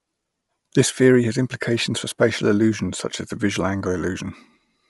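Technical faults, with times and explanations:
Throughout, Bluetooth LC3 compression: the speech is band-limited, with nothing above about 11.5 kHz, and carries a plainly audible breathy, grainy edge. This is likely the LC3 transform codec of Bluetooth LE Audio, which codes sound in short frames and replaces discarded upper-spectrum detail with synthetic noise. The grain fits 10 ms frames at a moderate rate of around 48 kbps, and the cutoff fits a reduced codec sample rate.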